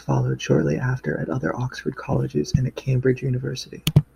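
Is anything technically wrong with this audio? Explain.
No, the recording comes across as technically sound, with nothing in the signal that points to a fault in how it was captured or transmitted.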